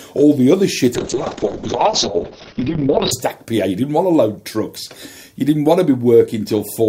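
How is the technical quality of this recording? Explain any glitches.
The recording has one clear fault, a call bitrate drop, from 0.95 s to 3.17 s. The encoder was forced onto far fewer bits, which fits a fall from about 96 kbps to around 6 kbps, held at its lowest for about 2.16 s. At that rate the codec quantises coarsely and narrows the audio band from 20 kHz to 6 kHz. The sound turns muffled, rough and watery, with the top end gone, until the bitrate recovers at 3.17 s.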